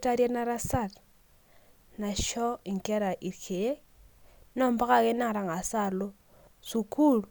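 No technical faults can be heard anywhere in this speech recording. Nothing in the audio calls for a timestamp or an explanation of a failure.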